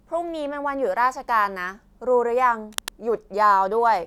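Cable scratch noise appears from 2.71 to 2.90 s, a burst just under a fifth of a second long. A dense, irregular crackle rides over the speech, sitting roughly 10 dB below it. The likely cause is a worn cable, connector or control being moved: its contact resistance jumps around rapidly as it shifts, and those fluctuations enter the signal as uneven bursts of noise that sound like a brief rustle.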